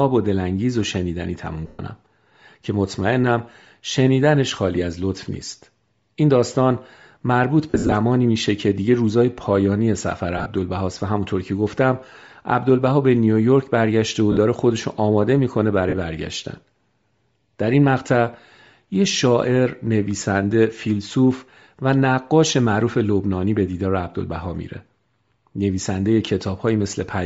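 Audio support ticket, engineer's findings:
Speech throughout has a breathy, grainy edge on upper harmonics. Spectrogram shows a noise-filled, patchy top band. Likely Bluetooth LC3 compression at 10 ms frames, consistent with about 32 kbps.

Lost LE Audio frames: speech smears into brief noisy hiss at 1.67–1.79, 7.70–7.92 (scattered, longest run about 50 ms), 10.38–10.46, 14.32–14.37, 15.89–15.94, and 20.20 s. Decoder repeats the last spectrum with random phase, so the spectrogram shows smeared blocks and the waveform shows a fading envelope.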